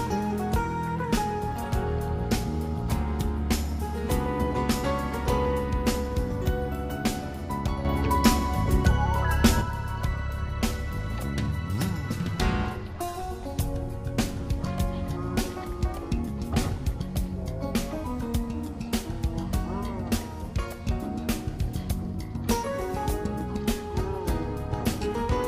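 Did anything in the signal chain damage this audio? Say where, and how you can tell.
Yes. From 7.85 s to 9.61 s the whole signal, background noise included, jumps up by about 6 dB at once and drops back just as abruptly. This sudden gain jump likely comes from a digital gain stage applying a one-bit shift without a ramp.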